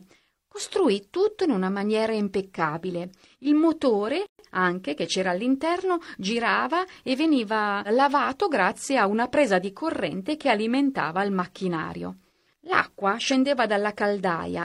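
Speech clip with one gap at a join of encoded pieces. From 4.26 to 4.39 s, a silence of about 128 ms cuts into continuous speech. Its edges are smeared by the codec, so the fully silent part is shorter. The speech resumes exactly where it stopped, at "anche che c'era all'interno". The audio was encoded as separate pieces, about 10 s long, and joined untrimmed. Each piece's encoder start-up delay and final-frame padding stayed in, leaving this hole at the seam.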